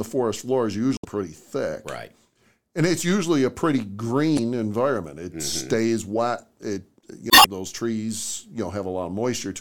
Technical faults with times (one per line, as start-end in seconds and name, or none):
0.96-1.05 damaged data in a compressed stream
4.35-4.40 damaged data in a compressed stream
7.27-7.46 damaged data in a compressed stream